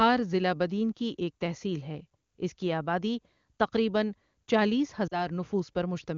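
A speech recording carried over the AMR wideband (HD Voice) codec, clear at its high rate, with a brief dropout from 5.07 to 5.27 s. About 40 ms of lost AMR speech frames, fitting two 20 ms frames, made the decoder stretch and fade the last good sound before the speech recovered.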